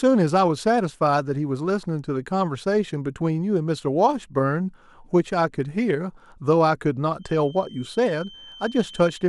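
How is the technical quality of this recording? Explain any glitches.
One fault affects the speech, near the end. Feedback whistle, 7.16 s to 9.29 s: likely a loudspeaker-to-microphone loop poised at the edge of feedback, leaving a thin, slowly swelling and fading 3.1 kHz tone well below the voice.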